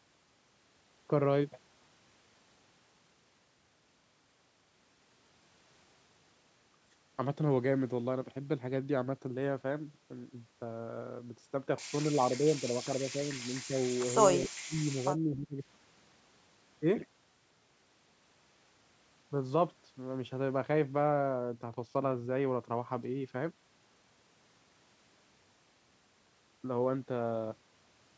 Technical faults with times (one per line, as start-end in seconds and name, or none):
12.17-15.59 speech suppressed in double talk